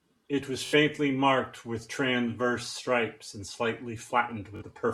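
At 0.66 s and again at 4.56 s the speech breaks into a brief machine-gun buzz, Bluetooth stutter, as the receiver replays its last short buffer while packets go missing. Unlike a dropout, there is no silence, and the speech resumes about 60 ms and 40 ms later as if it had played on.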